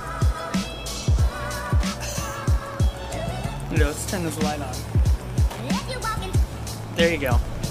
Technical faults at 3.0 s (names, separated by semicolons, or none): Wi-Fi interference